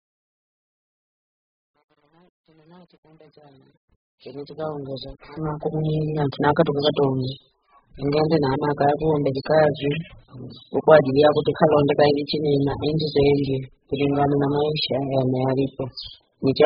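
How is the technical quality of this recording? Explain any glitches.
The technical quality is poor, because heavy codec damage runs through the whole recording. Throughout the speech, the sound is dull, with nothing above 5 kHz. Sibilants smear and fizz, and sustained sounds warble. This is likely AAC compression at a very low bitrate, around 8 kbps. At that rate the encoder drops the high band and starves the remaining frequencies, leaving holes in the spectrum.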